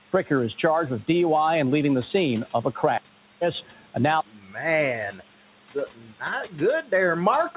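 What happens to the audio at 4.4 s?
Between 4.32 and 4.56 s there's speech cut by the noise suppressor: it mistook part of the speech for background and pulled it down by about 11 dB, so that stretch sounds swallowed and faint. The noise suppressor artifacts are also present, with the residual noise ducked by about 12 dB.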